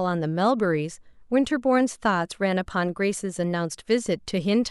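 At 2.7 s the speech is interrupted by a brief blip, a corrupt frame decoded rather than concealed. Bits within one compressed frame were damaged, and the decoder played it anyway, reading wrong gain values and spectral codes. The result is a burst of misplaced energy lasting only about the span of a single frame, heard as a short squeak riding over the speech at a modest level, peaking somewhere around -35 dBFS.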